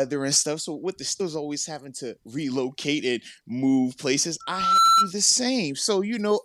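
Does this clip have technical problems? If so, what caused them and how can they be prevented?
Yes. At 1.2 s, right after "with the", compressed frames are skipped: whole frames went missing or were rejected by the decoder, so the speech jumps ahead to "always having to relocate". With frames of about 26.1 ms, the gap sounds like roughly four frames, around a tenth of a second gone. The overlap between frames turns the join into a short smeared blip, not a click. To prevent it, check file integrity and use error-resilient transport so frames arrive intact.

From 4.40 to 5.12 s, just after "relocate and move places", there's a loudspeaker feedback squeal at 1.3 kHz. The mic is hearing the speaker it feeds, and at that frequency the loop gain tops one, so the tone builds over roughly 0.4 s until it sits about 10 dB above the speech. Next time, keep the mic away from the speakers, lower the gain, or notch out 1.3 kHz.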